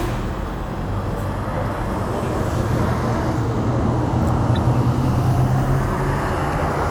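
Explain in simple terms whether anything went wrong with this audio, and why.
Two short glitches stand out, and both are a corrupt frame decoded. At 1.23 s there's a faint, quick glitch, and from 4.54 to 4.57 s a much louder one. Some of the compressed data got scrambled, but the player decoded it anyway, so for a split second energy lands in the wrong places and you hear a chirp, squeak, blip or burst of noise instead of the real sound. Each glitch seems to span a couple of frames.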